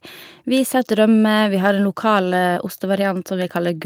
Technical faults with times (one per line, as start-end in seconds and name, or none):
none